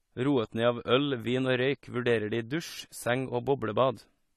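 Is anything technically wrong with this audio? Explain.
Yes. Throughout the speech there's plainly audible AAC compression damage: nothing above 13.9 kHz, with a dull, smeared, warbly texture on sustained sounds and sibilants. That's likely AAC-LC starved of bits, consistent with roughly 32 kbps, dropping its cut-off and quantising coarsely.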